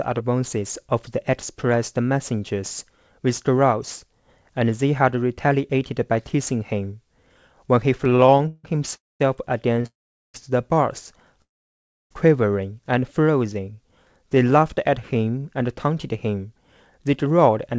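A speech recording carried over a wideband call link, with nothing above 8 kHz as expected of G.722, breaks up from about 8 s on. Repeated stalls (stutter) appear from 7.98 to 8.66 s and from 9.74 to 9.86 s: the jitter buffer kept running dry, so the receiver stretched the last sound across eleven gaps in the first stretch, the longest 158 ms, about 295 ms in all and close to half that span, then across three short gaps of up to 25 ms. The speech drags and jerks, though nothing is lost. Call audio freezes occur at 8.96 to 9.22 s, 9.86 to 10.36 s and 11.42 to 12.12 s, with the held sound fading into roughly 0.21, 0.41 and 0.65 s of silence. The likely cause is packets held up in transit, leaving the receiver nothing to play, after which the speech resumes where it stopped, later by the length of each pause. A jitter buffer slow-down runs from 13.39 to 15.44 s: the receiver repeated single pitch periods to rebuild its reserve, adding 205 ms and playing at 90% speed, so the speech sounds drawn out at unchanged pitch. 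A jitter buffer speed-up follows from 16.99 to 17.74 s: to shed surplus delay, short pitch-period pieces totalling around 70 ms were cut, pushing the speech to 108% speed and making it sound hurried.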